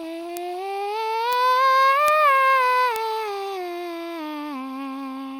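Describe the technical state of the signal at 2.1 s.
At 2.08 s a bit error spike occurs. A single bit flipped in storage or on a digital link, so the sample value jumped by a power of two and snapped straight back. The spike is so brief that it points to the fault lasting only about two samples. In the music it sounds like one sharp, broadband tick peaking near about -4 dBFS, standing apart from the surrounding material and unrelated to it.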